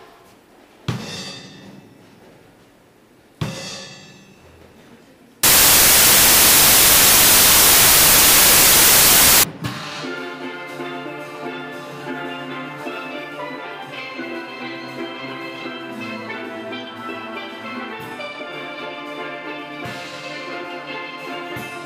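From 5.43 to 9.43 s, the samples are built from the wrong bytes. The reader assembles each sample's bytes out of order or misaligned. Fast-changing low bits land in the high positions. The result is four seconds of loud, harsh broadband noise.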